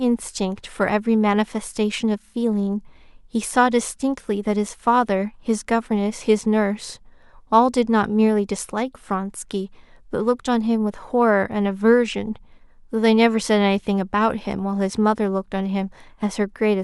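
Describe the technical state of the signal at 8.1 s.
At 8.1 s the speech signal is intact, with no audible fault at that moment.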